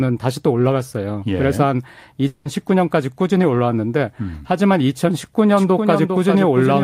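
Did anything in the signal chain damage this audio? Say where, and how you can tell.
Yes. At the network stage, a long network dropout runs from 2.27 to 2.47 s. About 180 ms never arrives and is masked by a fading buzz, likely from lost packets.

From 5.57 s to the end, a doubled audio track appears. A dry, full-band copy trails by about 400 ms and sits about 5 dB lower. This likely comes from a second, slower capture path.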